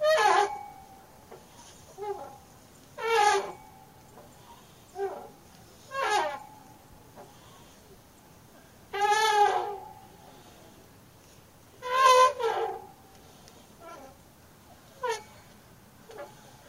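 Nothing here trips any technical alarm: the recording of sounds runs along without a single audible glitch, dropout or hiccup anywhere in it.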